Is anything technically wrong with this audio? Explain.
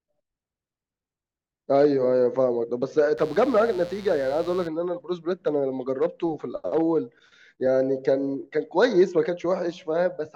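Yes. From 3.18 to 4.68 s, mains buzz: switching spikes from 60 Hz power leak in twice per cycle, adding a raspy, harmonic-rich buzz roughly 25 dB below the speech.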